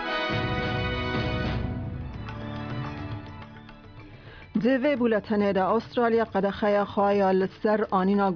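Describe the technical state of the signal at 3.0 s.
At 3.0 s the signal is intact, with no dropouts, clipping, glitches or other faults audible there.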